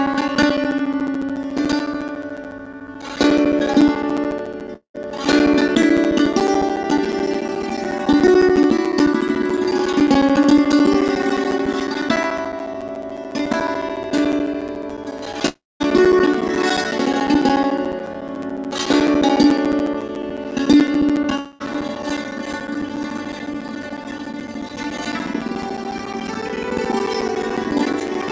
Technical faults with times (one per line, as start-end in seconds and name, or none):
0.00-28.31 block size mismatch (padded)
4.75-4.97 long network dropout
15.48-15.82 long network dropout
21.36-21.71 long network dropout